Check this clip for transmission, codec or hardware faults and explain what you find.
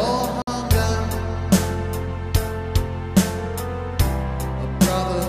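One fault is audible. From 0.42 to 0.48 s the sound drops to silence for about 54 ms, then resumes. This is likely a Bluetooth stall. Radio interference held packets back, the receiver's buffer emptied, and playback paused until the resent data arrived.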